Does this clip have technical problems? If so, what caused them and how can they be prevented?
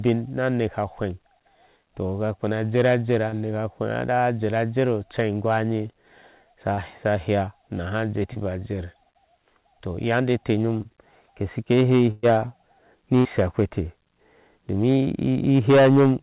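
Yes. Four brief smears or wobbles break the speech at 3.29, 6.74, 8.33 and 10.82 s, each lasting about 30 ms, and a short consonant can drop out. This is short concealed packet loss. About 30 ms of the call reached the decoder too late or not at all. The receiver filled each gap by extending the last sound, using its pitch where the speech was voiced and shaped noise where it was not, then blended back into the real signal. To prevent it, give the connection enough jitter-buffer headroom and stable bandwidth so that packets arrive on time.

At 12.11 s a held buzz or fading hiss replaces about 120 ms of speech, and at 13.19 s the same happens for about 60 ms. The speech then resumes further along, with the part in between missing. This is a burst of packet loss. Several consecutive packets were lost, so the receiver kept extending the last sound and turned it down until real audio returned. 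Nothing is heard above 4 kHz, which fits the narrowband call codec. To prevent the bursts, use a more reliable network path, and enable forward error correction or redundancy so that lost packets can be rebuilt.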